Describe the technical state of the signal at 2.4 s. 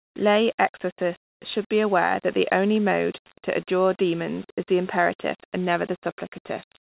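At 2.4 s the speech is intact, with no dropout, click, distortion or other fault at that moment, only the steady grainy floor of correctly read 8-bit audio.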